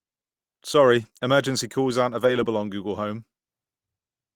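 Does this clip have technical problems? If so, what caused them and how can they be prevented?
Yes. Lost packet rebuilt from error correction shows up at 1.01 to 1.07 s, just before "emergency calls aren't", and again at 2.19 to 2.37 s, just after it. Packets went missing, but each following packet carried a low-bitrate copy that the decoder played instead, so nothing drops out. Those stretches, about 40 ms and then 100 ms of rebuilt sound, come through rougher and noisier, pointing to two and five lost packets. A steadier network path or a jitter buffer would prevent it.

Short concealed packet loss follows at 1.09 to 1.13 s, also just before "emergency calls aren't". About 20 ms of audio arrived too late to decode, and the receiver bridged the hole by extending the preceding sound before blending back into the real signal, giving a brief smear or wobble where roughly 14 ms was synthesised. 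Reducing congestion and giving the jitter buffer more headroom would prevent it.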